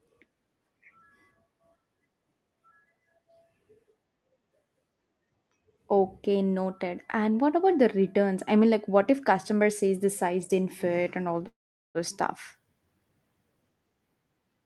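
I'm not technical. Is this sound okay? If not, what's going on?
No, there's one glitch. At about 11.47 s the speech stalls for roughly half a second, until about 11.98 s. It's a call audio freeze: a brief fading buzz, then near-silence for most of that stretch, before the talking picks up right where it left off with nothing lost. The likely cause is that bits of the call got held up in transit, so the receiving end ran out of sound to play and had to wait.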